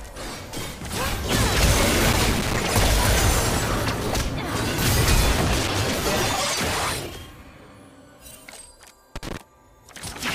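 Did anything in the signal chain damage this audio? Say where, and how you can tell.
Yes. Three irregular bursts of scratchy crackle break into the sound, from 2.12 to 2.58 s, 5.37 to 6.02 s and 9.16 to 9.37 s, with the signal chopping in and out under them. This is loose connector crackle in the analogue wiring. A worn or dirty contact is intermittently opening and closing as it shifts, cutting the signal on and off in ragged fragments. Any DC on the line turns those breaks into pops.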